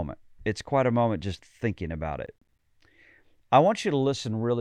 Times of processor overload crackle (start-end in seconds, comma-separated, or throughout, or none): 2.26-2.59